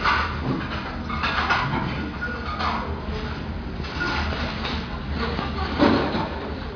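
Nothing is technically wrong with this recording of sounds.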